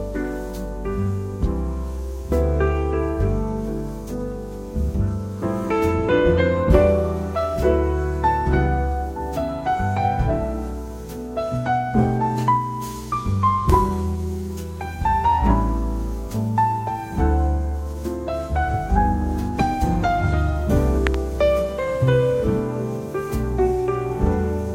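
A voltage transient, likely from a plug, switch or static discharge, was added to the signal path twice, producing loud pops. The first, from 13.70 to 13.72 s, is a single sharp pop peaking roughly 15 dB above the surrounding sound. The second, from 21.07 to 21.16 s, is a double pop in quick succession, around 20 dB above the signal. The audio carries on beneath both.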